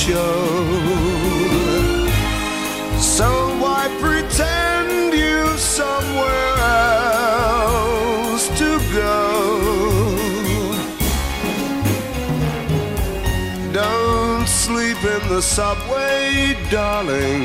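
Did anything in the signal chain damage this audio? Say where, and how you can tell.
No, I hear no damage from any stage of the signal chain in this audio.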